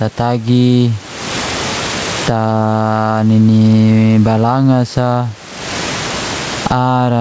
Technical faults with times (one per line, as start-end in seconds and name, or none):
0.00-7.20 gain pumping